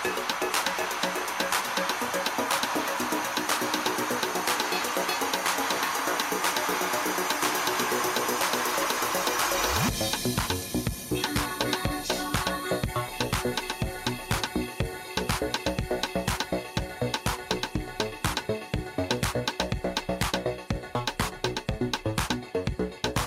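Nothing stood out on listening to this clip.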